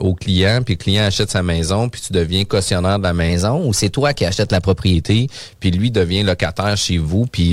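A speech clip: from 3.30 to 4.94 s, right after "deviens cautionnaire de la", playback runs 6.34% fast and 106 cents sharp, then snaps back. A spectrogram shows the harmonic stack jumping up and dropping down abruptly. This is likely a drift correction step, where clock-matching software briefly altered the rate to balance its buffer.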